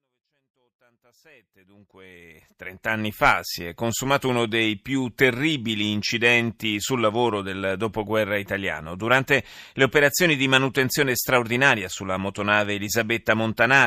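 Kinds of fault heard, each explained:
No faults can be heard in this speech recording.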